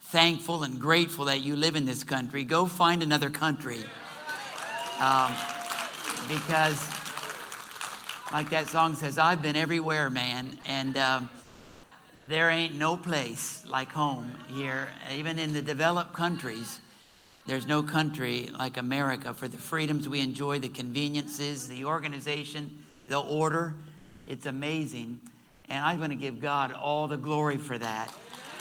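Discontinuous transmission, likely Opus DTX, halted sending in pauses, so the receiver synthesised comfort noise in place of the background at 11.43, 12.15, 17.01, 22.89, 23.97 and 25.47 s. Each 120–480 ms stretch turns flat and featureless, shifting level by about 1 to 9 dB.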